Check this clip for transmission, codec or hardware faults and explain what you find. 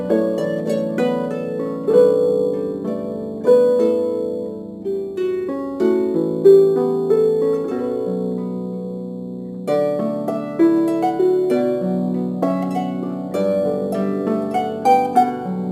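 One fault runs through the whole clip: crude rate conversion. The sample rate was changed with no anti-aliasing filter, simply by repeating the nearest existing sample to fill each new slot. The sound points to a step from 44.1 kHz up to 48 kHz. The repeated samples leave a periodic timing error that produces inharmonic tones at roughly 35 dB below the signal. These are heard as a gritty fizz that tracks the loud and high-frequency parts of the sound.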